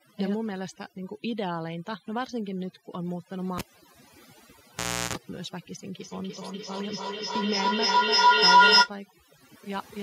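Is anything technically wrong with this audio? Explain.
Yes, there are two faults.

Overdone noise removal runs through the whole clip. The noise reduction was set too aggressively and switched off narrow frequency bands that sat near its estimate of the background noise, taking quiet speech detail with them. The background collapses into near silence with twinkling specks.

A feedback howl runs from 5.99 to 8.95 s. Two devices in the same room share the call, and each pass from microphone to loudspeaker adds level. The tone builds to about 14 dB above the speech, settles near 1 kHz, and its repeats come roughly every 0.3 s.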